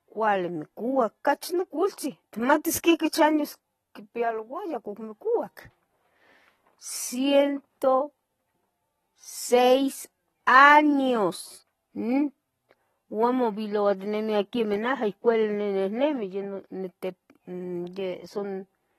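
From start to finish the speech sounds dull and smeared, with a watery, warbling edge on held sounds and a fizzy texture on the sibilants. Nothing gets through above about 13.8 kHz, so the top end is simply gone. That's likely AAC compression at a low rate, something around 24 kbps. The encoder has dropped its cut-off and is starving the bands it keeps, which smears and fizzes audibly.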